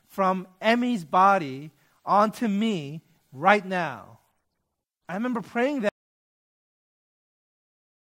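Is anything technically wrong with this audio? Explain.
Yes. At 5.89 s the speech cuts out mid-flow. It drops to complete silence, with no room tone, until the end. This is an audio dropout to silence. The input was likely lost while the recorder kept writing zeros. About 2.1 s of speech is gone.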